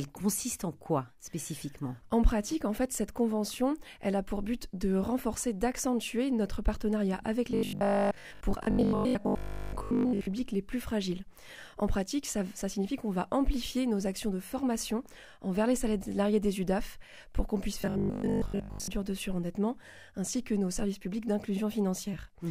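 From 7.51 to 10.35 s and from 17.82 to 18.98 s the sound turns into a rigid 50 Hz buzz. This is robotic sound from repeated short buffers, likely a 20 ms block looping while most incoming audio is skipped. A spectrogram shows stripes at multiples of 50 Hz; the waveform repeats identical cycles.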